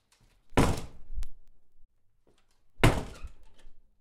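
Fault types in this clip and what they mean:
Word clock ticks: A digital link feeds a device running on its own clock, not locked to the sender's. The two clocks drift apart, and each time they slide past each other the receiver misreads the stream. Here ticks recur at a steady rate, about every third of a second, from 0.25 s to 3.92 s. There are around fifteen in all. Each fits a single sample slipping. The rate points to a clock mismatch of roughly 100 ppm.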